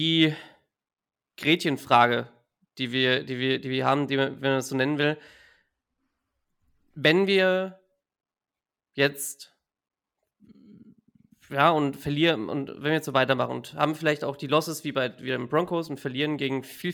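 A speech recording with channel delay (comb filtering) from 3.83 to 6.19 s. One channel runs late by about a single sample, a few hundredths of a millisecond, and when both are summed to mono the first cancellation falls near 20 kHz. The audible result is a dulling of the top end rather than an obvious hollow, phasey sound. Unlike a flanger, the notch stays fixed, and unlike a simple low-pass filter, the loss comes from cancellation between the two channels.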